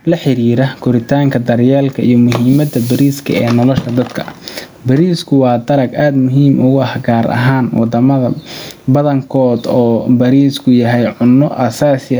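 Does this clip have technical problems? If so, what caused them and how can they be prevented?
Yes. Gain pumping runs through the whole clip. The room noise sits about 43 dB below the speech, and the gain swings roughly 15 dB. The likely cause is excessive input gain with a fast limiter. Lower the input gain so the limiter rarely engages.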